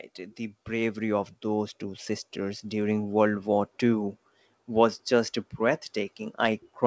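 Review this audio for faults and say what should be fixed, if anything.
Automatic gain rising runs from 0.66 to 4.16 s, ending just before "was just". The gain control judged the input too quiet and kept raising its gain, lifting the speech and the background noise together by about 10 dB over three and a half seconds. On a waveform the envelope widens steadily across that span, noise floor included. A spectrogram shows every band brightening evenly, against a band-limited picture with nothing above 8 kHz, which fits G.722 at 64 kbps. To prevent it, set a proper input level at the source and either disable automatic gain control or slow and cap its gain changes.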